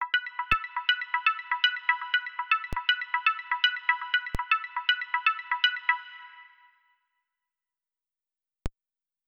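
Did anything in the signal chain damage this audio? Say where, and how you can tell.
Yes, there are four DC steps, at 0.52, 2.73, 4.35 and 8.66 s, pointing to the converter or analogue input. Each time the zero line jumps by about -19 to -17 dBFS, giving a low thump, then drains away through a 20 Hz high-pass while the sound carries on unaffected.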